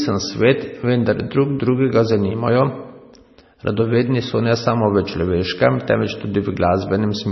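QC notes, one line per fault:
Throughout, MP3 compression: dull, watery speech with nothing above 5.9 kHz, likely heavy MP3 encoding around 24 kbps discarding treble and weak detail.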